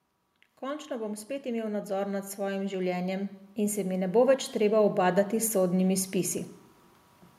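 Speech that grows steadily louder from 0.6 s to 6.42 s, rising about 14 dB, is automatic gain rising: the gain control judged the input too quiet and kept raising its gain. The background swells with the voice at the same rate, which separates this from a talker simply getting louder. The climb is slow and one-directional, unlike compressor pumping, which ducks and recovers quickly around loud syllables.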